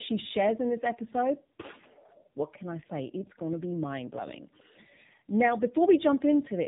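Tandem speech coding runs through the whole clip. The speech was decoded and recoded by two low-rate speech codecs in turn, which fits iLBC followed by AMR-NB. The second coder compounds the first one's errors. It sounds rough, muffled and warbly. Nothing remains above 3.8 kHz.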